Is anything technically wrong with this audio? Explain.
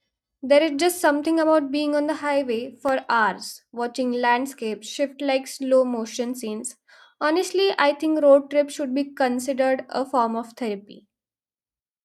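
Yes, CD scratch ticks. From 2.63 to 3.14 s, just before "watching landscapes shift like", five short ticks, the longest around a millisecond, recur once per disc revolution. A scratch defeats error correction, so the player patches or mutes samples. A spectrogram shows thin vertical broadband lines; the waveform, brief spikes or gaps.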